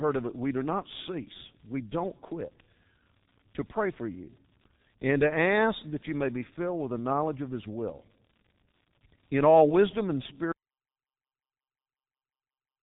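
Speech passed through the G.723.1 codec for its whole length, with heavy damage. Nothing above 3.8 kHz survives, so the sound is muffled and hoarse and consonants blur; the coarse, slowly updating voice model fits the 6.3 kbit/s mode. At 10.52 s, right after "in all wisdom and", an audio dropout to silence begins and lasts to the end: silence with no room tone, most likely from lost input while recording continued.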